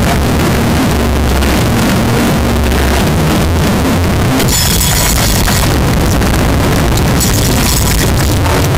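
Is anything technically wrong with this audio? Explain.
Yes. A signed and unsigned mix-up runs through the whole clip. The sound is harsh, heavily distorted and uniformly loud, with quiet stretches as loud as the rest. The likely cause is 16-bit samples read with the wrong sign convention, which flips the top bit so every zero crossing jumps across the full range.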